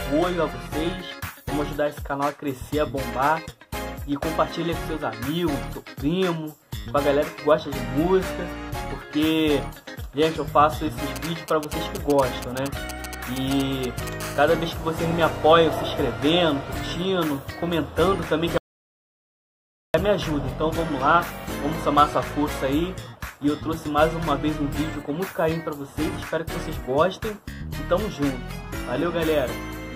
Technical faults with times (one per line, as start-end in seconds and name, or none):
11.16-14.09 GSM signalling bursts
14.20-15.73 GSM phone buzz
18.58-19.94 audio dropout to silence